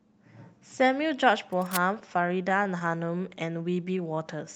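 Speech, in which a short burst of scratching and rustling sits over the voice from 1.52 to 1.82 s, roughly 10 dB below the speech and dense and uneven rather than a steady hiss. This is cable scratch noise. The ragged texture points to a worn cable, connector or control being moved, with its contact resistance jumping about as it shifts. That is the likely cause, and it fits how briefly the burst comes and goes. From 1.99 to 3.21 s the speech drags and catches in repeated stalls (stutter): ten small hitches spread across that stretch, each no longer than 14 ms, adding 98 ms in all, or about 8% of the span. The receiver ran dry again and again as audio arrived late and kept stretching the last sound to bridge each wait, so nothing is actually lost, but the flow keeps snagging. Finally, from 3.70 to 4.46 s, the speech turns slightly slow and drawn out while keeping its pitch. It plays at 93% speed, with 65 ms added. 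This is a jitter buffer slow-down. With its reserve running low, the receiver repeated single pitch periods and slivers of pauses many times over to rebuild a cushion, which lengthens sounds without lowering them.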